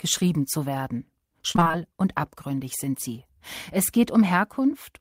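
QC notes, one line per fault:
1.51–1.75 s, repeated packet loss (robotic sound): between "zu werden" and "und abgründig sind sie" the audio breaks up into six short gaps, the longest about 25 ms. Each time data went missing or arrived late, the decoder covered the hole by extending the last stretch of sound, so about 120 ms is patched and about half of the 240 ms span is concealed. The close succession of patches produces the choppy, robotic texture.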